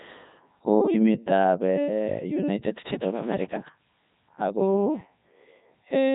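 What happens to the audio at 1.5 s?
The Codec 2 vocoder affects the whole clip, including 1.5 s. Speech is rebuilt from sine waves using only pitch, voicing, energy and envelope, so it sounds heavily robotic and buzzy. A spectrogram shows regular harmonic stripes with nothing above 3.8 kHz, which fits Codec 2's narrowband output, here at 3.2 kbit/s.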